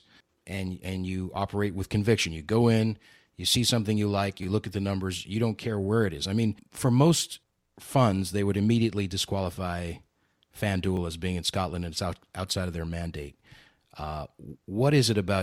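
Repeated buffer at 0.55 to 0.57 s, just before "and you operate with"; at 4.43 to 4.45 s, between "see something you like" and "you look at the"; and at 10.97 s, before "as being in". Each time, new audio arrived late and the last short block, which fits a 10 ms buffer, played again: twice more at the first two points and once more at the third. The hard joins make each one sound like a brief click or buzz.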